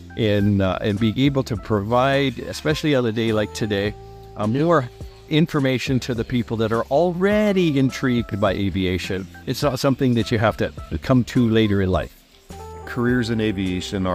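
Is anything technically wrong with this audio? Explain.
No, nothing here sounds technically wrong; it's a perfectly ordinary recording with nothing to flag.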